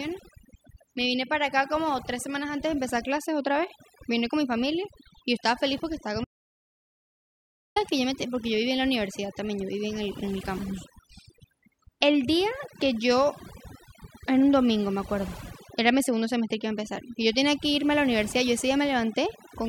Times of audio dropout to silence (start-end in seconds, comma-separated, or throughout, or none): 6.24-7.76